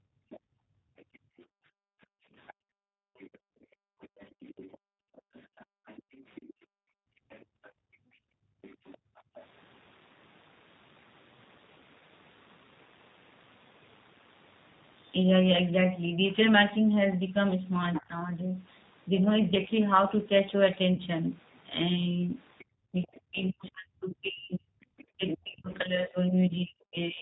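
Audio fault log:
Throughout: G.729 codec. The 8 kbit/s G.729A encoding is plainly audible. The speech is rebuilt from a vocal tract filter, a pitch predictor and a few pulses per frame, so it comes across rough and slightly synthetic, with nothing above 4 kHz.
0.0 to 9.35 s: background gated by the echo canceller. The canceller kept clamping the mic while the loudspeaker was active. The room sound drops out by as much as about 40 dB, for around seven seconds in total, then comes back each time it lets go.
20.94 to 21.01 s and 25.72 to 25.76 s: VoIP packet loss concealed by the speech codec. About 40 ms went missing in the first gap and 20 ms in the second, which fits two packets and then one. The decoder stretched its last pitch and filter into a fading buzzy tone or coloured noise, and the voice stays weak for a moment after each gap.
22.58 to 23.21 s: other side's voice leaking through. 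A faint second voice sits well under the talker, something like 25 dB down. The likely cause is loudspeaker playback that the echo canceller didn't fully remove from the mic.
22.84 to 27.22 s: speech suppressed in double talk. The talker's voice keeps dipping very deeply for about three seconds all told, right where the far side overlaps. The likely cause is the canceller losing track of which voice was echo and turning everything down.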